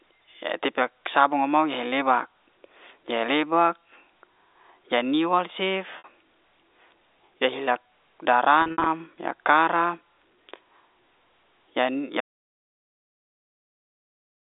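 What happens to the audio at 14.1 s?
At 14.1 s the clip is in an audio dropout to silence. It starts at 12.21 s and runs to the very end. The speech cuts off abruptly and leaves dead digital silence. No room tone or line hiss remains, even though the narrow telephone band is audible before the gap. The likely cause is a lost input, such as a dropped link or a mute, while recording carried on writing silence. Whatever was said during the gap is gone.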